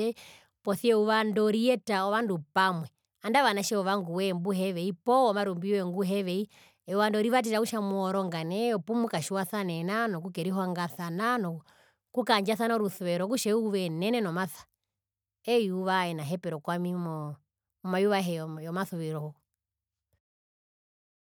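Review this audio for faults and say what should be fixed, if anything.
Nothing needs fixing: the speech signal is continuous and stable throughout, with no technical faults to be heard.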